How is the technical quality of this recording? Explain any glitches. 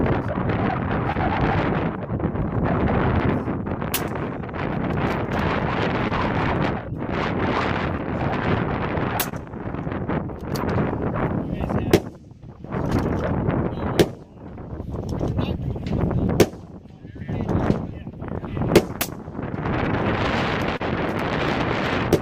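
The recording has timing glitches from one underlying problem: the two ends of the link run on clocks that disagree.

Clock drift between sender and receiver runs through the whole clip. The sender's clock is about 1.5 percent slow relative to the receiver's, so audio arrives slightly slower than it is played out. The jitter buffer keeps draining, and the receiver has to compensate. You hear this not as a single event but as a faintly uneven, dragging quality throughout, plus the specific corrections and stalls below.

Repeated timing corrections occur from 0.24 to 7.08 s and again from 10.26 to 19.21 s. To keep the buffer from running dry, the receiver repeatedly repeats short slivers of audio, slowing playback to 99 percent. The first stretch gains roughly 70 ms in total and the second roughly 150 ms. Each insertion is tiny, so the result is a slightly unsteady tempo with occasional soft hiccups rather than obvious skips.

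Short stalls from a late packet occur at 1.12 to 1.17 s, 6.08 to 6.13 s, 9.29 to 9.34 s and 20.77 to 20.82 s. In each case a packet was not there when due, the buffer emptied, and the receiver stretched the last sound for 26, 28, 30 and 33 ms respectively before resuming where it left off. Nothing is lost, but each spot has a briefly held sound with a slight buzz or dip. The delay grows slightly with each one, consistent with the slow sender.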